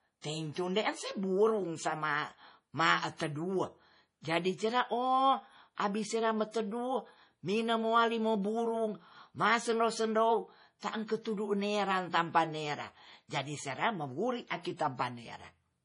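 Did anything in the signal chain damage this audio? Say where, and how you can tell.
Yes. The codec stage is likely the culprit: heavy MP3 compression throughout the speech. Nothing is heard above 10.5 kHz, and the sound has a watery, swirling quality with metallic s sounds, which fits a starved bitrate around 32 kbps zeroing weak frequency lines frame to frame.

There is also pre-echo from 10.79 to 10.83 s, just before "ku tedu nera tampan". Quantisation noise sized for the sharp onset spreads back over the quiet part of its block, so about 34 ms of hiss precedes the attack, which sounds smeared.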